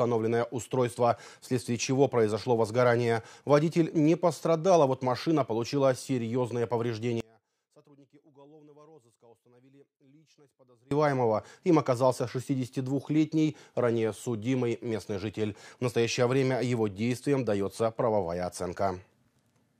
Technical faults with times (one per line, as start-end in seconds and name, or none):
7.20-10.91 one channel inverted